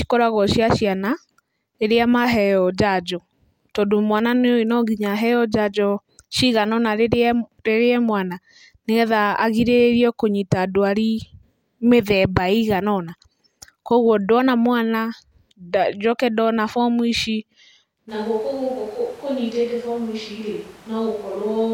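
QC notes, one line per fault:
18.1 s to end, switch to a distant microphone: At 18.1 s the voice abruptly turns roomy and hollow, with thinner bass. It falls about 5 dB, and room noise sits roughly 20 dB below the speech. The close microphone likely dropped out, leaving a farther one.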